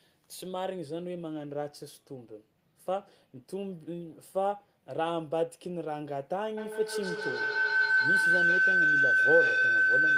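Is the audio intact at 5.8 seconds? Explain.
Yes, the audio is intact at 5.8 seconds, with no dropout, click, distortion or other fault audible at that point.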